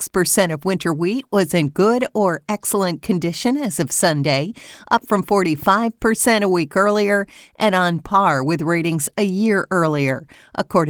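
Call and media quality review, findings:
No faults found in this speech clip; the Opus voice compression path, running hybrid at 20 kbps fullband, leaves only light codec softening.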